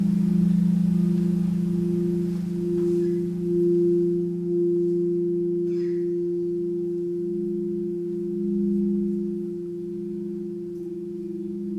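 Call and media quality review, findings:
No audible faults found.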